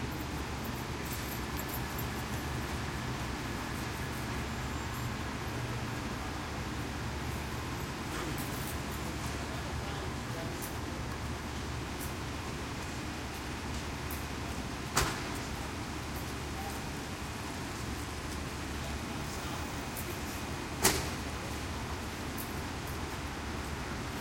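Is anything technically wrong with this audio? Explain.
No, nothing technically wrong can be heard here.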